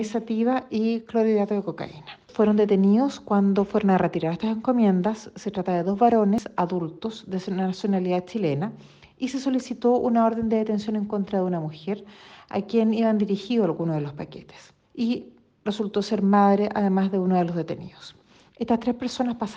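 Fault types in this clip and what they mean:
Damaged data in a compressed stream: Part of the coded data arriving at the decoder was wrong or missing. The decoder could not read those frames properly, lost its place and had to hunt for the next valid frame header before playing on. Each time this is heard as a brief chirp or blip breaking into the sound. It happens twice, at about 2.29 s and 6.38 s, and each disturbance is very short.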